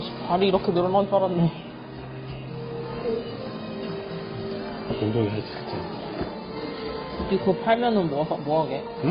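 Throughout the clip, the audio has likely passed through transcoding between lossy codecs, a low-rate AAC-style encode followed by Opus. The second codec wastes bits re-encoding the first one's smearing and adds its own, so layered swirly artefacts persist, with nothing above 17 kHz.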